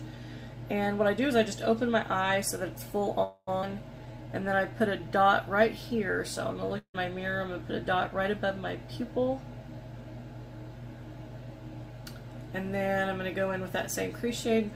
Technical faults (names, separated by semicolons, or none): call audio freeze; skip ahead; jitter buffer slow-down; long network dropout